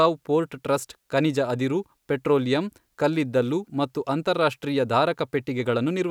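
No technical faults are audible.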